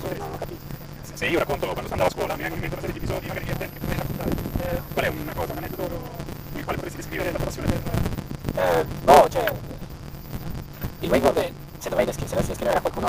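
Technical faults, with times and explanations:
Throughout: block size mismatch (truncated). The end of each longer block is discarded, causing a 172 Hz buzz and playback about 1.88 times faster at near-normal pitch, which fits a 256-sample read.
3.51–5.84 s: switching supply whistle. A faint high whistle drifts between 13.0 and 13.3 kHz, well below the main sound, from a switching supply in audible burst mode or beating with another supply.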